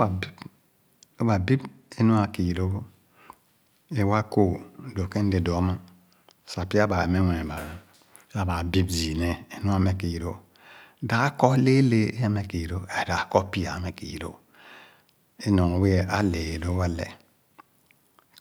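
From 1.19 to 2.34 s the speech shows channel delay (comb filtering). One channel arrives late by roughly one sample, a few hundredths of a millisecond, and when the two are summed to mono the shared content cancels at regularly spaced frequencies. With so short an offset the first notch sits up near 20 kHz, so the effect is a slight dulling and loss of air at the very top rather than an obvious hollow, phasey colour.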